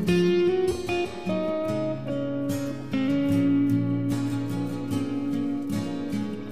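From 2.62 s to 5.98 s a GSM phone buzz intrudes: a hard, raspy drone at about 217 Hz, sitting roughly 29 dB below the programme and unrelated to it. A nearby 2G handset exchanging data transmits in bursts, and the audio circuitry rectifies those radio pulses, so the buzz cuts in and out irregularly. A spectrogram shows stacked horizontal lines at 217 Hz multiples, switching on and off in blocks; the waveform carries a fine, regular pulse train.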